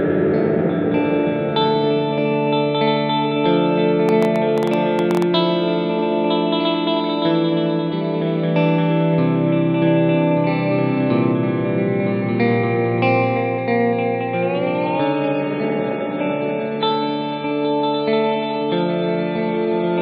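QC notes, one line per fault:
4.09–5.23 s, train of clicks: Something is injecting a short pulse into the signal path, likely electrical interference from nearby equipment or a faulty connection or power supply. Around fifteen clicks of much the same shape arrive at an uneven pace, averaging about 10.6 per second. They stand out at about 10 dB above the surrounding audio, so they are heard as a distinct ticking or popping laid over the sound for just over a second.
14.78 s to the end, adaptive stream at a lower bitrate: The stream switched to a much leaner encoded version partway through, with no gap, which fits a step from MP3 at 128 kbit/s down to about 24 kbit/s. From that point nothing above 5 kHz remains, so the treble abruptly disappears and the audio turns dull and boxy. Coding artefacts also become more noticeable, giving a watery, smeared quality that lasts until the clip ends.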